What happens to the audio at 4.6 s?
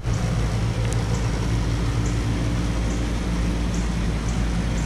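Nothing goes wrong at 4.6 s: the audio plays through that moment intact, with no dropout, click, distortion or other audible fault.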